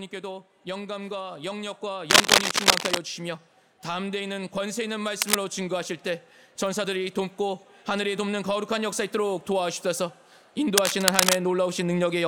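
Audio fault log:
2.10–2.98 s, 5.13–5.35 s and 10.77–11.39 s: cable scratch noise. Dense, uneven scratching and rustling over the sound, roughly level with it in the middle burst and a bit louder in the others. The likely cause is a worn cable or connector being moved, so its contact resistance jumps rapidly.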